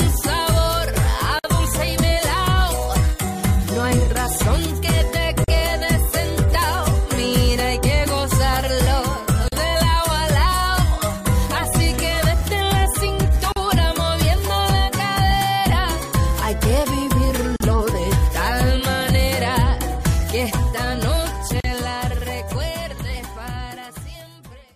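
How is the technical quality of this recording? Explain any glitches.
The recording is interrupted by a regular series of short silences, a gap at a join of encoded pieces, at 1.39, 5.44, 9.48, 13.52, 17.56 and 21.60 s. The first lasts about 52 ms and the rest about 40 ms each. Separately encoded pieces were joined without trimming the encoder's leading delay and final-frame padding. Each gap cuts in with softened edges, and the sound resumes exactly where it stopped. The strict 4 s spacing sets this apart from random dropouts.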